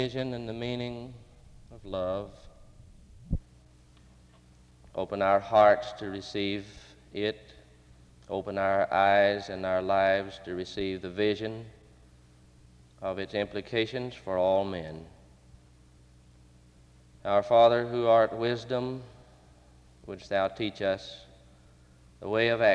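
Nothing in the recording stood out as a technical problem on listening.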